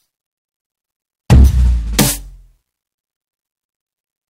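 From 1.30 to 1.47 s the music breaks into hard clipping: pushed about 9 dB past what the stage can pass, its peaks are sliced flat, adding a harsh, gritty fuzz high up the spectrum, abrupt and brittle rather than the rounded warmth of soft saturation.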